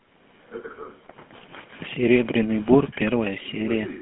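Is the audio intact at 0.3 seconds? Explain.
No. At 0.3 s, as throughout, the speech carries GSM full-rate codec damage. The codec rebuilds the voice from a vocal-tract model driven by sparse, regular pulses. This gives a buzzy, gravelly roughness, plainly audible, with nothing above 3.4 kHz, which fits a 13 kbps phone codec.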